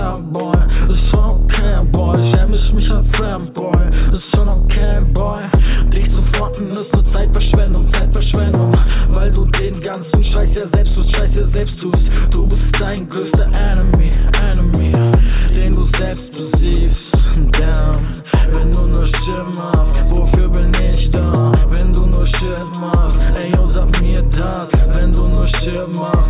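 No technical faults are audible.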